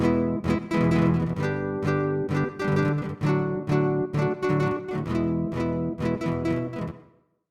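A short recording of everyday sounds, and there's nothing technically wrong to point to anywhere in it.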